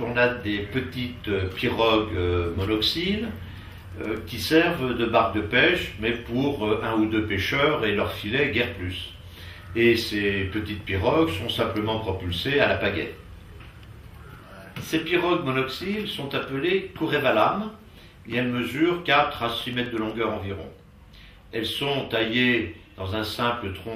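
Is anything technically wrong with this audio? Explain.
Yes. CD scratch ticks occur at 3.55–4.90 s (12 ticks) and 19.12–20.10 s (9 ticks). A scratch defeats error correction once per disc revolution, and the player conceals the bad samples, producing regular clicks of a few milliseconds at about nine per second.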